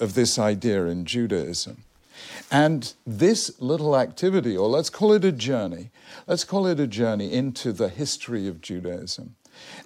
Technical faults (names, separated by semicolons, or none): none